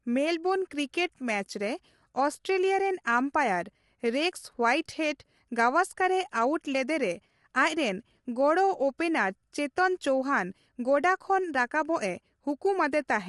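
From start to finish the speech carries plainly audible coding damage, with the voice sounding rough and grainy and noise filling the gaps between pitch harmonics. Nothing is present above about 11.6 kHz. The likely cause is low-delay AAC compression of the AAC-ELD kind used in video calls, at a rate that fits roughly 32 kbps. Its short frames cannot separate closely spaced harmonics well, so the coder spends bits inefficiently and smears noise across the spectrum.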